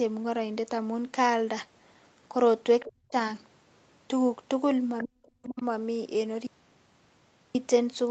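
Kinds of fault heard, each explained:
Other side's voice leaking through: at 2.80 to 2.92 s, 4.99 to 5.04 s and 5.58 to 5.63 s, brief scraps of a second voice sit under the talker, the first two about 15 dB below the speech and the last far fainter, about 35 dB down. The likely cause is a loudspeaker on the talker's device feeding the far end back into the microphone, with the echo canceller failing to strip all of it out.
Speech suppressed in double talk: from 2.89 to 3.15 s and again from 5.05 to 5.63 s, the talker's level collapses, at worst by about 40 dB, for roughly a third of a second and then about half a second. Each dip lands on or just after a leaked scrap, likely because the echo canceller, hearing both sides at once, could not tell its own talker from the echo and turned everything down together.
Audio dropout to a faint residue: at 6.47 s the sound cuts out abruptly and returns at 7.55 s, a gap of 1.08 s. 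The gap is not silent but holds only hiss about 50 dB below the signal, the sign of a path that stayed live after the wanted signal was lost. The abrupt stop and restart, with no fade on either side, likely mark a break upstream rather than a natural pause.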